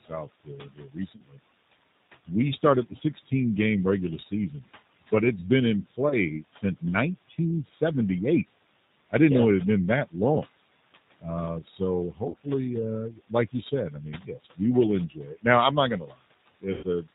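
Noise suppressor artifacts run through the whole clip. The suppressor pulls down every band it judges to be steady noise by about 18 dB, frame by frame. The room noise, sitting about 15 dB below the speech, drops away in pauses and swells back under the talking.

The G.729 codec damage is also constant and plainly audible. The sound points to the 8 kbit/s G.729A variant. That coder rebuilds speech from a vocal-tract filter, a pitch predictor and a handful of pulses per frame, and it passes nothing above 4 kHz. The result is a muffled, band-limited sound with a rough, synthetic edge, and the residual noise takes on a warbling texture.

Speech cut by the noise suppressor first appears from 0.02 to 1.39 s. Here the suppressor mistakes speech for background and turns down about a second's worth of it by as much as about 19 dB, so the opening sounds faint and swallowed.

Inside that stretch comes the first VoIP packet loss concealed by the speech codec, at 1.16 to 1.22 s. 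About 40 ms is missing, which fits two lost packets. The decoder fills the hole by extending its last pitch and filter with falling gain, giving a brief buzzy smear that fades out.

Further suppressor cuts follow. From 2.27 to 3.31 s, ending just before "game regular", a short portion is lowered by up to about 11 dB. From 4.18 to 4.52 s, just after "game regular", a brief consonant or word ending dips by about 8 dB. Between 5.11 and 7.82 s, scattered pieces are pulled down by as much as about 19 dB.

Within that last stretch, concealed packet loss recurs at 6.09 to 6.16 s. This gap is 20 ms, consistent with a single packet, and it is heard as a short tonal blur.

From 11.19 to 12.47 s the suppressor again swallows fragments of speech, reaching about 21 dB of cut. Inside it, at 12.30 to 12.35 s, a 40 ms gap is concealed. The voice stays weak and distorted for a few frames afterwards, because each decoded frame builds on the previous one.

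From 13.12 to 15.45 s, the suppressor turns down quiet syllables by up to about 20 dB. Altogether that comes to well over half a second, and those syllables sound faint or missing.

The longest concealment comes last, at 16.73 to 16.85 s. About 100 ms is lost, which points to five consecutive packets. The decoder stretches the final sound into a buzzing, coloured tone that decays away, and the speech returns weakened for tens of milliseconds after the packets resume.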